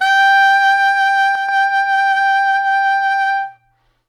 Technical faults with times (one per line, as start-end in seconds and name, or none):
1.35-1.49 one channel drops out